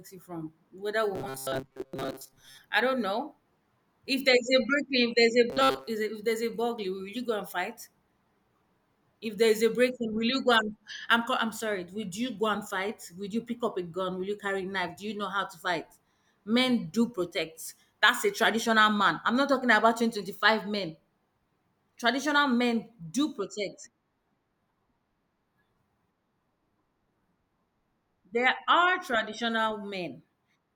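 Audio data is likely reaching the playback stage too seldom, so the software bridges the gaps by looping a short slice of about 7.5 ms while most of the real speech is skipped. That produces robotic sound from repeated short buffers: a rigid, metallic buzz at 133 Hz that only loosely tracks the words. It runs from 1.15 to 2.58 s, after "you from whether" and before "I don't know", and again from 5.50 to 5.87 s.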